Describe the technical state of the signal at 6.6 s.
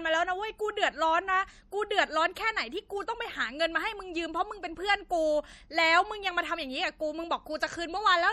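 At 6.6 s the speech carries plainly audible damage of the kind MP3 compression leaves, present throughout the clip. The sibilants sound watery and metallic. Consonant attacks are smeared. The cause is likely an MP3 encoder running short of bits, which fits a rate near 48 kbps. It zeroes weak frequency lines. Those lines flicker on and off between frames, giving the swirly texture.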